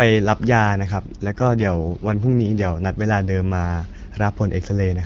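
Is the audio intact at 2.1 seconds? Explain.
No. From 1.23 to 2.76 s the voice turns rough, raspy and synthetic while the bandwidth stays unchanged and nothing drops out. This is an AMR rate drop. The wideband codec falls back to fewer speech bits, which fits a switch from 12.65 to 6.6 kbit/s.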